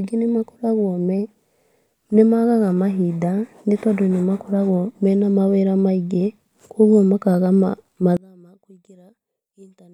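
From 8.17 s to the end at 9.94 s, the speech suddenly drops by about 31 dB and turns faint. Centred content cancels when the channels combine. The likely cause is one channel inverted, its reversed polarity cancelling what both channels share.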